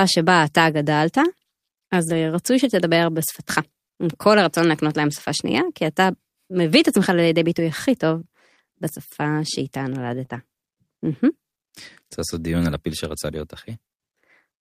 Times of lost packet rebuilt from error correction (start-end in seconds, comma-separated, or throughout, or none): 2.05-2.19, 5.07-5.29, 10.30-10.36